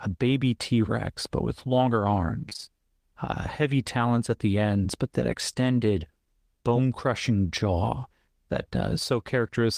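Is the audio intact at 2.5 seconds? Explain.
No. From 2.49 to 2.68 s, between "but with longer" and "uh heavy talons at", the speech turns choppy and robotic. This is repeated packet loss: about five short holes, the longest 21 ms, each patched by stretching the preceding sound, concealing nearly half the span.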